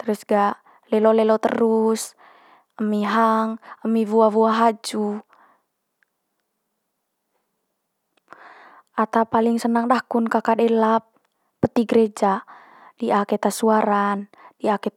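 Nothing stood out on listening to this speech recording.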